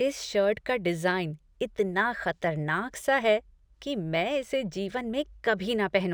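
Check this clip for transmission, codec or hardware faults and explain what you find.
One fault runs through the whole speech clip: imaging from linear upsampling. The sound fits a rate raised from 24 kHz to 44.1 kHz by joining samples with straight lines. That is a weak filter. It softens the top of the original band and leaves a mirrored copy of the spectrum between 12 kHz and 24 kHz. The copy sits around 35 dB below the speech. It adds a faint metallic shimmer to sibilants.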